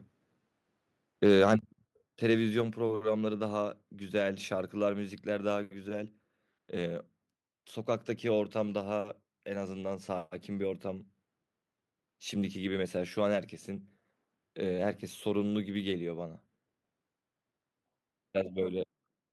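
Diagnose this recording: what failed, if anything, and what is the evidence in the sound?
Microphone overload, 1.26 to 1.54 s. For this stretch of speech the loudest peaks sound flattened and acquire a harsh, crackling edge, as if pushed about 4 dB past full scale, with a small fraction of the waveform squared off at the ceiling. The stage is the converter: the likely cause is an input gain set too high, so the analogue signal exceeded the converter's maximum code and the tops of the peaks were cut off.

Microphone volume stepped down at 1.6 s. Immediately after that distorted passage, both voice and background fall abruptly by about 5 dB in a single step, with no gradual ramp. This points to call processing: the likely cause is the call software detecting the clipping and lowering the device's input gain in one jump, which would explain the sudden level drop following the overloaded peaks.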